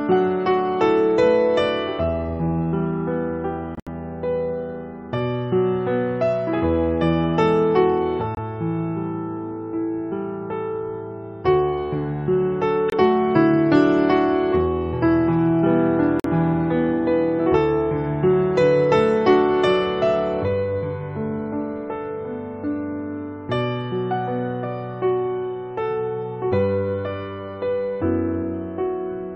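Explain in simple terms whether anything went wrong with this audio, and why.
Corrupt frame muted: some compressed chunks of audio arrived damaged, so the player discarded them and inserted silence. You hear abrupt gaps at 3.75 to 3.88 s, 8.35 to 8.38 s, 12.89 to 12.94 s and 16.20 to 16.26 s, without the timing shifting.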